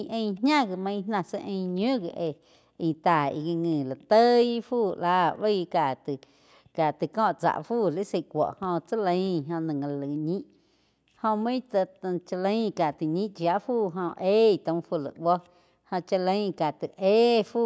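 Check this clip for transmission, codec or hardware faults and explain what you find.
No faults found.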